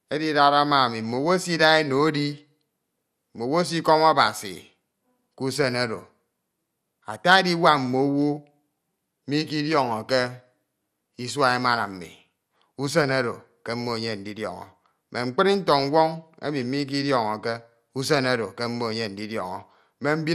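From start to finish the speech sounds dull and gurgly, with a granular edge and nothing above 14.4 kHz. That's likely MP2 compression starved of bits, dropping the top sub-bands and coarsely quantising what's left, which fits a rate around 80 kbps.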